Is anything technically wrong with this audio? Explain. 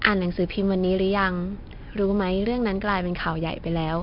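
Yes, the whole speech clip carries 4-bit ADPCM compression. Coarse 4-bit prediction steps leave heavy gritty hiss riding loud syllables, with nothing above 5.3 kHz, which fits a stream around 44 kbps.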